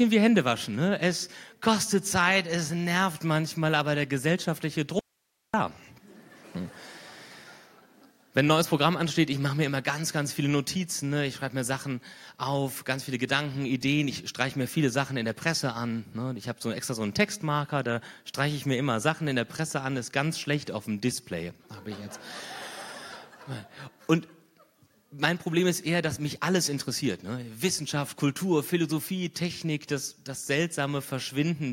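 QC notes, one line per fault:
4.99 to 5.54 s, audio dropout to a faint residue: the sound cuts off abruptly mid-flow and returns just as suddenly about 0.54 s later. The gap holds only hiss, roughly 50 dB below the normal level, with no pause or fade at either edge. The wanted signal was likely lost upstream for that half second while the rest of the path stayed live, so only its background noise came through.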